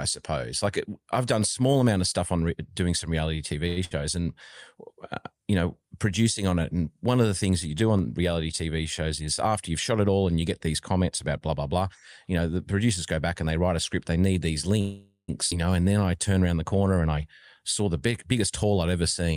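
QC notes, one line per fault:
3.67 to 3.79 s, short stall from a late packet: Right after "doing some reality" a packet turned up late and the jitter buffer ran dry, so the receiver held the last sound for about 92 ms until the packet arrived, then carried on from the same point. Nothing is lost, but that sound hangs on too long with a faint buzz, and the whole stream now sits about 92 ms later than before.
3.85 to 3.93 s, burst of packet loss: Just after the stall a run of audio went missing, roughly 60 ms. The receiver bridged the hole by extending the last sound for about 62 ms and letting it fade, so a brief held buzz or hiss stands where real audio should be, and playback resumes a little further on with that stretch gone.
7.99 s, dropped samples: The waveform jumps from one value to a later one, a loss of well under a millisecond, too short to take away any sound. The sudden discontinuity is heard as a single sharp click, a thin vertical line through the spectrum. 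The cause is likely a few samples missing from the stream.
9.02 to 10.16 s and 17.01 to 18.64 s, jitter buffer speed-up: The buffer was holding more audio than its target, so the receiver trimmed short pitch-period pieces again and again, about 100 ms in the first stretch and about 150 ms in the second, which begins after "around the corner". Both run at about 108% speed with unchanged pitch, so the sound comes across slightly hurried while the excess delay is worked off.
14.81 to 15.30 s, call audio freeze: After "need these" the buffer emptied, likely because packets were held up in transit. The receiver stretched the last sound for about 473 ms, fading it until about 110 ms of silence remained, then resumed exactly where it had stopped. Nothing is missing, but an unnatural pause has been inserted and the delay grows by about 473 ms.
15.50 to 15.53 s, skip ahead: With later audio already waiting, a stretch of roughly 300 ms was dropped, cutting the delay by about that much. 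Playback jumps forward with almost no gap, only about 4 ms of fill, so the two sides of the missing section are butted together directly and the sound seems to lurch ahead.
15.83 to 16.31 s, jitter buffer slow-down: The buffer was running low or had just raised its target delay, so the receiver repeated single pitch periods or bits of pause many times over to rebuild a reserve, adding about 75 ms. The sound plays at about 86% speed with unchanged pitch, giving drawn-out sounds.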